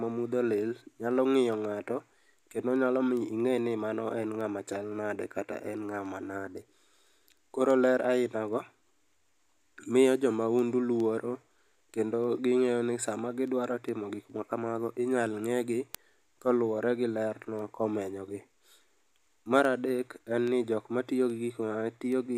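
From 0.29 s to 22.12 s the speech carries word clock ticks: some fifty sharp clicks recurring at a steady interval of roughly 0.4 s, varying in strength from one to the next. The receiving device is running on its own clock rather than locking to the digital source, with an offset in the region of 50 ppm. Each time the two clocks drift a sample apart, the receiver drops or repeats a single sample, producing a brief tick.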